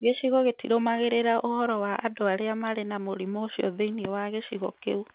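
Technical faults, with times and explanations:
Nothing faulty can be heard anywhere in this speech.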